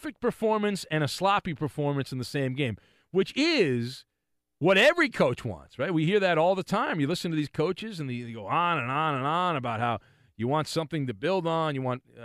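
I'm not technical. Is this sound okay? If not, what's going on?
Yes, no technical faults are audible anywhere in this speech recording.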